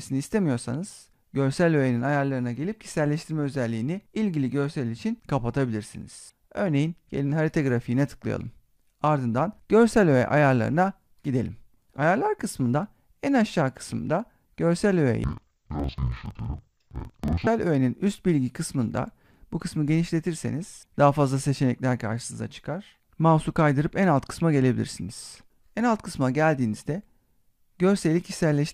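From 15.24 to 17.49 s, interleaved audio read as planar halved each 46.4 ms block, so the sound drops an octave, doubled and choppy.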